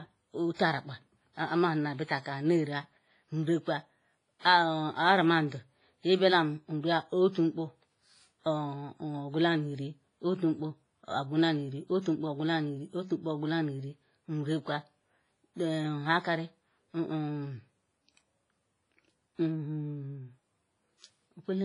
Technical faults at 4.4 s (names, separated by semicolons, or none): WMA compression; pre-echo